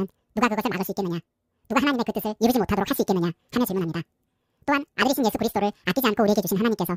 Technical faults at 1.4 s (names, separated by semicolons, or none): wrong sample rate